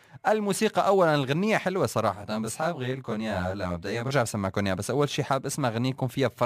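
From 2.15 s to 4.12 s the speech turns rough and slightly doubled, the sign of channel delay (comb filtering). One channel runs late by roughly 20 ms, and when the two are summed to mono, the shared content cancels at evenly spaced frequencies, with the first notch down near 20 Hz. On a spectrogram this section shows fixed horizontal dark bands, closely spaced, that do not move with the speech. The waveform envelope looks slightly smeared.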